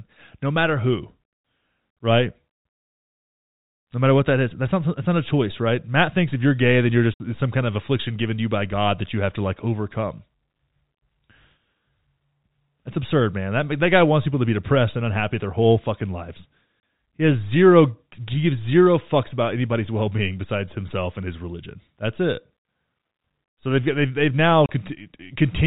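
Packet loss filled with silence occurs at 7.14 s for 60 ms after "you're gay then you're", then at 16.8 s and 24.66 s for 30 ms each. Lost packets were replaced with silence, leaving hard-edged holes. The gap lengths fit 30 ms packets.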